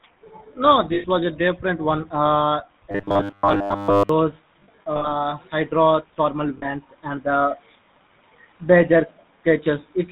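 GSM full-rate codec runs throughout. Its vocal-tract model with a sparse pulse excitation, consistent with the 13 kbps full-rate mode, leaves the speech buzzy and gravelly, with nothing above 4 kHz.

Lost GSM frames occur at 0.94 to 1.06 s for about 100 ms, at 4.6 to 5.07 s, and at 6.58 to 6.65 s for about 40 ms. In the 4.6 s stretch, 240 ms of losses are scattered over 440 ms, with the longest run around 70 ms. Each gap is bridged by repeating the last good frame, which produces a rough metallic ring.

A robotic sound from repeated short buffers runs from 2.91 to 4.09 s. A rigid 100 Hz metallic buzz replaces most of the audio while still loosely tracking the speech. This is likely caused by audio arriving too seldom, with the last 10 ms looped to fill the gaps.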